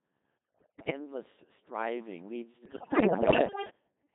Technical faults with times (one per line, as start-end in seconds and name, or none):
0.00-4.15 Codec 2 vocoder
0.39-0.89 bit errors on digital voice radio
2.65-3.69 bit errors on digital voice radio